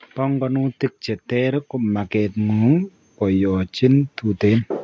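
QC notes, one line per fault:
0.15–4.19 s, automatic gain rising: the level of the speech and the room noise climbs together by about 12 dB over roughly four seconds, because the call's gain control judged the input too quiet and kept raising its gain, with the band-limited call microphone processing leaving nothing above 8 kHz.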